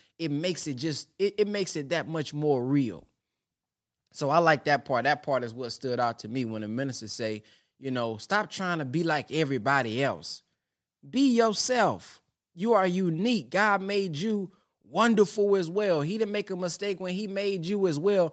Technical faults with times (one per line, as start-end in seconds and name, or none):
none